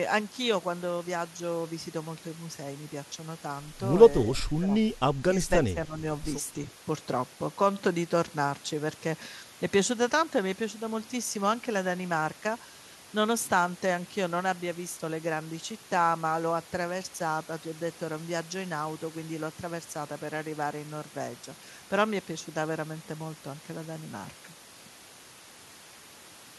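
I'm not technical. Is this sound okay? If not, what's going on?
No. At 4.34 to 4.72 s and 5.67 to 5.93 s the speech dips rather than cutting out cleanly. This is likely speech suppressed in double talk: the call's echo control turned this talker down while the other side was speaking.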